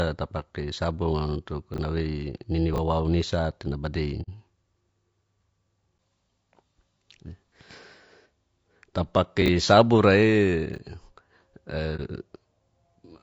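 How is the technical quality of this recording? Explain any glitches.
Technical quality is fair at best. The speech is clearly compressed the whole way through, and there are a handful of short glitches on top of that.

Across the entire clip the voice sounds rough and grainy, with a hiss filling the gaps between harmonics and a synthetic top end. That's most likely low-delay AAC compression (AAC-ELD-style), squeezed to a low rate, which fits something around 32 kbps. At that rate the spectrum is quantised too coarsely to keep the voice clean.

At 1.74–1.78 s, 2.74–2.78 s (right before "isate nabadei"), 9.42–9.48 s and 10.74–10.78 s you get chunks out of order. A 20 ms slice turns up late and plays after audio that should follow it, one slice behind and two at 9.42. It sounds like a brief jumbled stutter.

At 4.22–4.29 s, just after "isate nabadei", and again at 11.96–12.01 s there's AAC frame loss with muting. 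Missing frames were decoded as silence, about 60 ms and 30 ms respectively, so the overlapping windows fade the voice out and back in, leaving a soft-edged hole and a brief dip respectively.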